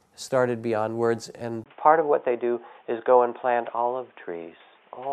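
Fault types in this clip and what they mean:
Input switched to a poorer device: At 1.64 s the recording input most likely jumped to a different, lower-grade microphone or a headset's call profile, and it stays there to the end. After a gap of about 20 ms the speech turns dull and boxy, with nothing above 3.6 kHz, the level shifts by roughly 5 dB, and a new background noise appears, sitting around 40 dB below the speech.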